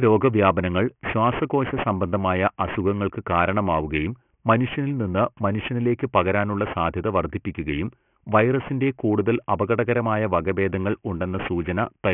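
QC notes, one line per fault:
Throughout: aliasing. The speech was resampled down without an anti-alias filter, which fits a drop to a 6 kHz rate. Energy above 3 kHz folds back below it as false, unrelated tones, roughly 15 dB under the speech. Sibilants sound gritty and metallic.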